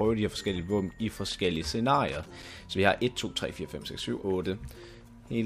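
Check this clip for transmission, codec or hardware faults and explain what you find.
One hardware fault is present: loose connector crackle from 2.08 to 2.49 s. A worn or dirty contact kept making and breaking for about 0.4 s, chopping the signal on and off, so the sound breaks into an irregular burst of scratchy crackle.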